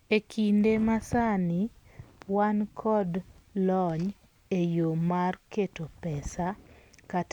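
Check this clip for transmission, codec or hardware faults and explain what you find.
No transmission, codec or hardware faults were found.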